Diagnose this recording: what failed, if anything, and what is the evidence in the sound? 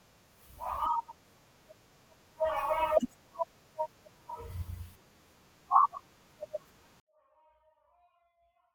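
Sample-format conversion failed with a 24-bit alignment error. At 7.0 s the speech suddenly drops by about 48 dB and stays nearly inaudible to the end. Its tone stays clean. The sound points to 24-bit samples in the low bytes of each 32-bit word being read as full 32-bit values.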